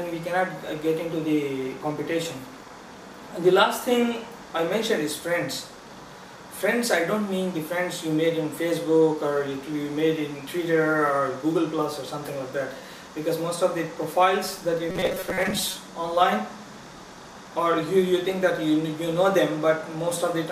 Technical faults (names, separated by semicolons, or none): robotic sound from repeated short buffers